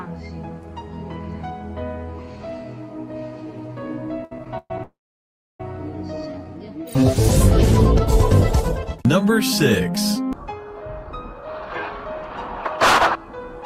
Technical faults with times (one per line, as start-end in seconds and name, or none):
4.24-4.80 repeated stalls (stutter)
4.83-5.61 call audio freeze
6.32-6.51 jitter buffer slow-down
10.98-12.75 jitter buffer speed-up
13.16-13.65 jitter buffer speed-up